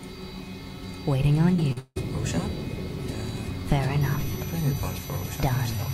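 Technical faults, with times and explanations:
1.53–1.98 s, repeated packet loss (robotic sound): five gaps in quick succession, the longest 175 ms, over half the stretch patched by repeating earlier sound, giving choppy, robotic fragments.
4.01 s to the end, switching supply whistle: a high whistle drifting between about 5.85 and 6.0 kHz, about 20 dB below the signal, from a switching power supply running audibly.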